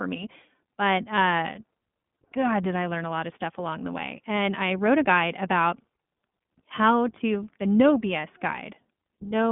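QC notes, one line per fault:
throughout, iLBC codec: the audio is confined to a telephone band of roughly 150 Hz to 3.5 kHz, with nothing above 3.7 kHz, and carries a plainly audible rough, synthetic grain. Plain band-limiting would only dull the speech. Here the excitation is rebuilt frame by frame without reference to the previous frame, which leaves a granular texture consistent with 20 ms frames, and the coarseness fits the 15.2 kbps mode.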